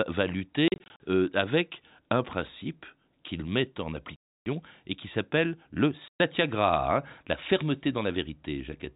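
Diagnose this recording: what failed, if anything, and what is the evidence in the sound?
The fault is in the network stage: packet loss filled with silence. From 0.68 to 1.00 s, just before "avec un principe qu'il", the speech is chopped by short holes, runs of up to 40 ms scattered across that span. A solid 300 ms gap sits at 4.16–4.46 s, between "principe qu'il met en" and "et qui s'appelle le", and a 120 ms hole follows "et qui s'appelle le" at 6.08–6.20 s. Each gap has hard edges, and the lengths fit 20 ms packets replaced by digital silence. The G.711 telephone band beneath them is intact.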